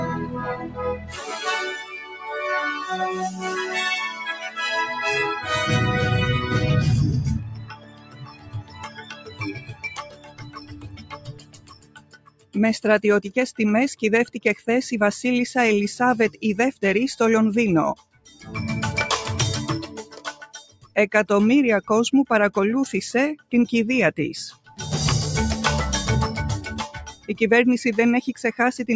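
A noise suppressor applied to music or sounds runs through the whole clip. A suppressor tuned for speech treats steady, sustained material as noise and keeps pulling it down, so the level swings by roughly 15 dB. Onsets push through, but held parts sink, and the sound pumps and thins as the gain rides up and down. The band also stops at 8 kHz, consistent with call microphone processing.

Sound cut by the noise suppressor is heard at 0.51 to 4.58 s, 7.53 to 12.55 s, 14.27 to 14.68 s, 16.3 to 20.96 s, 23.37 to 24.79 s and 27.1 to 27.35 s. Drops reach about 11 dB in the first stretch and about 14 to 18 dB in the later ones. The longest losses are around five seconds in the second span and around two seconds in the first. Each time, sustained or decaying material is mistaken for noise and ducked, so it sinks in level or its decay is cut short while sudden sounds stay largely intact.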